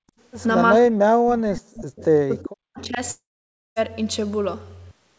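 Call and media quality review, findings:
Background gated by the echo canceller, 0.00–0.07 s: room noise dips by about 36 dB at onset. The echo canceller clamps mic gain while far-end audio plays. On the waveform the noise floor is notched to near-flat. On the spectrogram there is a brief vertical blank band across all frequencies.

Speech suppressed in double talk, 0.77–3.0 s: near-end speech repeatedly dips, thins or cuts out, totalling roughly two seconds. The drops are around 40 dB deep. This is likely AEC suppression misreading overlapping talk as echo. The waveform shows chopped envelopes. The spectrogram shows gaps and missing upper harmonics.

Echo leak, 1.98–2.05 s: a faint delayed copy of earlier speech arrives 389 ms late, around 30 dB below the speech. It is likely residual echo that the far end's canceller missed. On the spectrogram it appears as a weak, smeared repeat of a prior harmonic pattern. 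It is barely visible on the waveform.

Long network dropout, 3.11–3.79 s: about 0.66 s of audio is lost, likely from packet loss. Concealment extends the last sound as a fading buzz, and then roughly 0.55 s of near-silence follows. The spectrogram shows a smeared decaying tail, then an empty block. On the waveform the amplitude decays to flat before abrupt resumption.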